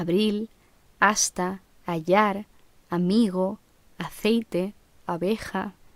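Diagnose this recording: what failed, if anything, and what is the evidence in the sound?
Nothing here failed as far as I can hear, so there's no broken stage to point to and no evidence of trouble anywhere in the recording.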